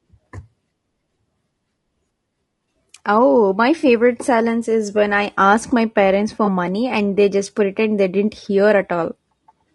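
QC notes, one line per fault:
Throughout: low-delay AAC compression. The speech has a plainly audible rough, grainy texture, with noise filling the gaps between pitch harmonics and a synthetic-sounding top band. Short transform frames resolve harmonics poorly, likely AAC-ELD at a bitrate that fits around 32 kbps.
3.79–3.85 s and 6.45–6.48 s: AAC frame loss with concealment. About 40 ms is dropped just before "silence is when I", and about 20 ms between "ask my parents for" and "money and they just". The decoder patches each gap from the previous spectrum, producing a brief smeared, noisy patch. The durations fit two 20 ms frames and then one.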